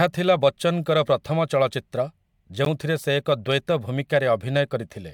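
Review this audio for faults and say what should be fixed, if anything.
A gap between stream segments occurs at 2.65 s, just before "ସେ ଏକ". Segment timestamps leave a 13 ms hole, filled with hard-edged silence. Align segment timestamps so each one starts exactly where the previous ends.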